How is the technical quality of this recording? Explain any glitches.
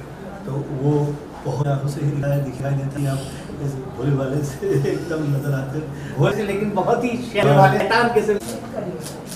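The recording has two sequencing glitches. Chunks out of order occur at 2.23–2.97 s (one 0.37 s block late) and 6.32–7.80 s (three blocks late). Each produces a jumbled stretch with three hard joins. Unlike dropouts or stutters, no audio is missing or repeated; it is only misplaced.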